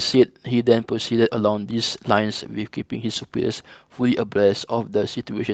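Nothing in this speech stood out on listening as a technical fault.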